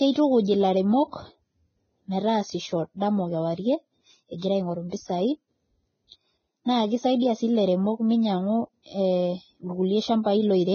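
From start to finish the speech is band-limited, with nothing above about 6.5 kHz, and the remaining treble is hissy and grainy: sibilants turn to coarse noise and steady tones sound roughened. This is heavy damage from Vorbis compression, likely at a bitrate around 16 kbps, where the codec discards the top band and quantises the residue above its spectral floor so coarsely that fine detail becomes noise. Unlike a simple low-pass filter, which would only dull the sound, the band that survives here is itself corrupted.

At 4.37 s there is pre-echo: a short hiss rises for about 49 ms, ending at 4.42 s, just before a sharp onset, and the attack itself sounds smeared. The quantisation noise that belongs to the loud part of the transform block has spread back into the quiet moment before it. Background noise or a click would not line up with the attack like this. The hiss comes before the onset.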